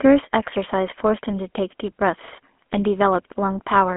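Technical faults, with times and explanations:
Throughout: GSM full-rate codec. Pulse-excited vocal-tract model over a 250 Hz–3.4 kHz line band gives a buzzy, gravelly roughness. The spectrogram is blank above 3.4 kHz, with smeared, grainy harmonics.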